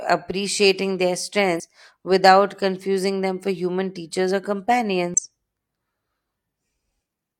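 At 1.56 to 1.61 s and again at 5.14 to 5.20 s, the speech breaks into a brief chirp or squawk. These are damaged data in a compressed stream. Corrupted bytes made the decoder misread those frames and lose sync until it found a valid frame header.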